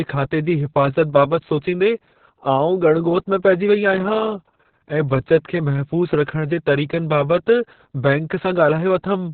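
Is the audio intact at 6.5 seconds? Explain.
No. At 6.5 seconds, as across the whole clip, the speech sounds muffled, hoarse and slightly robotic, with nothing above about 4.5 kHz. This is Opus voice compression running its SILK linear-prediction coder in narrowband mode. At a rate that points to roughly 6 kbps, the codec discards the upper band and describes the excitation driving its speech model only coarsely. That coarse excitation produces the rasp and synthetic edge heard here.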